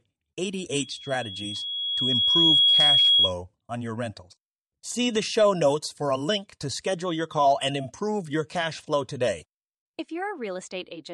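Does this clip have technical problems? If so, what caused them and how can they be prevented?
Yes. From 0.80 to 3.33 s there is loudspeaker feedback squeal, ending just before "on your rentals". A 3.3 kHz tone swells over about a second and a half. It peaks roughly 10 dB above the speech. The microphone was picking up its own loudspeaker, and at that frequency the loop gain exceeded one. Lowering the loudspeaker gain, moving the microphone away from the loudspeaker or notching out 3.3 kHz would prevent it.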